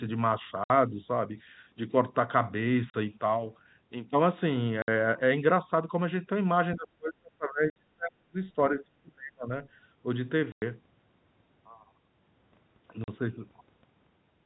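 Packet loss filled with silence occurs at 0.64, 2.9, 4.82, 7.7, 10.52 and 13.04 s. The gaps last 60, 40, 60, 60, 100 and 40 ms, all multiples of 20 ms, which fits 20 ms packets dropped in runs of two to five. The receiver put digital silence where the missing audio should have been, so the speech stops abruptly and restarts. Each gap is bounded by a hard edge.

Speech suppressed in double talk runs from 6.75 to 8.37 s and again from 8.55 to 9.5 s. The level dips in pieces, by about 35 dB at its deepest in the first stretch and about 30 dB in the second, with roughly 1.5 s and 0.7 s of the sound affected. The likely cause is an echo canceller that, with both ends active, could not tell its own talker from loudspeaker echo and pulled everything down. The 7.7 s dropout falls inside the first stretch.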